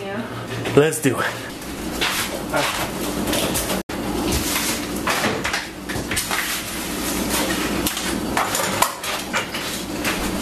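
At 3.81 s a digital broadcast dropout fades the sound out over 8 ms. About 72 ms is lost, consistent with three failed frames, until 3.90 s.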